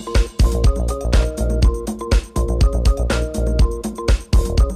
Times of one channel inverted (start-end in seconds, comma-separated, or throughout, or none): none